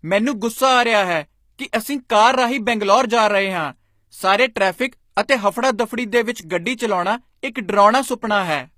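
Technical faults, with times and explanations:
Throughout, HE-AAC compression: the treble has a gritty, metallic sheen, with s sounds going lispy and nothing at all above 15.5 kHz. The codec damage is plainly audible. That points to a low-bitrate setting, likely around 24 kbps with HE-AAC v2. Only the lower band is really coded, and the top gets rebuilt by copying lower bands upward under a rough envelope. So the upper harmonics don't sit where the real ones would, and that's the grit you hear.
4.91 s and 5.15–5.17 s, pre-echo: just before each of these two sharp onsets there's a brief wash of hiss, and the attack itself lands soft and smeared rather than crisp. The first spreads over about 13 ms, the second over about 23 ms. The codec spreads its quantisation noise across a whole transform block. When a loud attack sits late in that block, noise sized for the loud part leaks into the quiet stretch just ahead of it.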